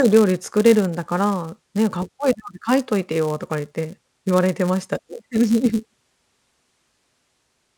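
Speech carrying a steady 172 Hz buzz throughout, from a filter restarted on every block: each block, which fits a 256-sample size, begins from silence with a small transient. Unlike mains hum, this buzz follows the speech level.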